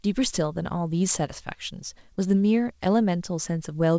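At 2.14 to 2.19 s, about 40 ms of speech arrived too late for the decoder. This is a short concealed packet loss. The receiver covered 31 ms by extending the preceding sound before rejoining the real signal, leaving a brief smeared wobble. The call path carries no content above 8 kHz.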